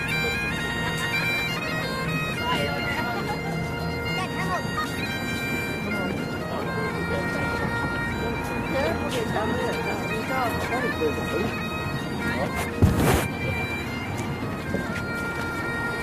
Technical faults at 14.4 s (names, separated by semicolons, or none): none